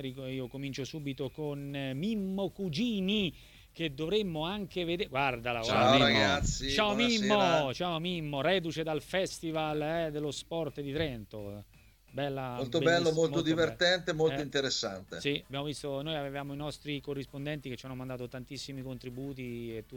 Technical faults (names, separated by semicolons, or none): none